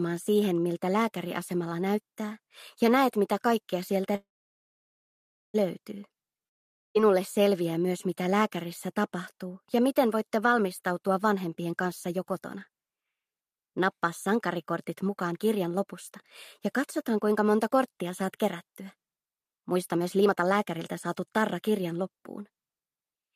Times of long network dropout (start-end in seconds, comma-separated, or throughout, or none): 6.47-6.97